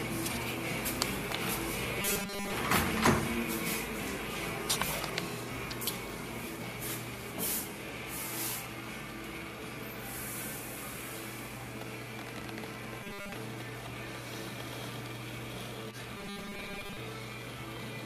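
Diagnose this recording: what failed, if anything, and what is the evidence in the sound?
Robotic sound from repeated short buffers, at the driver or buffer stage: at 2.02 to 2.53 s, 13.03 to 13.34 s and 16.17 to 16.97 s the sound turns into a rigid 200 Hz buzz, likely from a 5 ms block replayed while incoming audio was skipped. Unlike dropouts, no silent gaps open.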